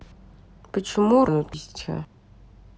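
At 1.28 s, 1.54 s and 2.05 s the capture likely fell behind and lost buffers (dropped buffer, overrun). At each the speech jumps ahead, skipping about 0.7 s first, then about 0.3 s twice.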